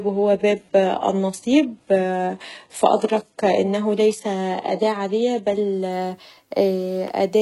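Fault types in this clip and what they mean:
Adaptive stream starting at a low bitrate: The player began on a cheap version of the stream. It upgraded once it had gauged the connection. Until 5.92 s the speech sounds dull and smeared, with nothing above 11.5 kHz. Then clarity jumps, with no gap.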